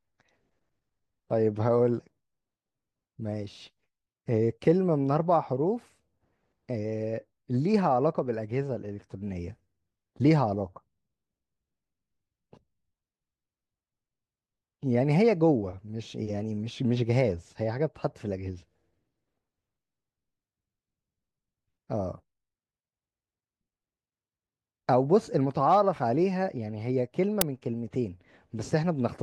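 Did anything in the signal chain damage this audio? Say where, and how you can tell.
Yes. At 27.41 s in this speech, an uninitialised buffer at the driver or buffer stage produces a very short, loud crack. It lasts about 5.33 ms, which fits a 256-sample buffer played out before any audio was written into it, so stale memory was heard as samples.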